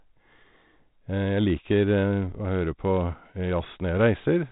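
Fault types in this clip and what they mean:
No faults can be heard.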